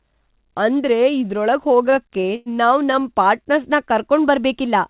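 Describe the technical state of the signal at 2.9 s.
At 2.9 s the audio is inside a run of repeated stalls (stutter) lasting from 2.85 to 3.08 s. Packets arrived late, so the receiver's jitter buffer ran dry five times, and each time it stretched the last sound to cover the wait, about 53 ms in total, the longest about 15 ms. Nothing is lost, but roughly a quarter of that span is filler, so the sound drags and stutters, all within the call path's 4 kHz band limit.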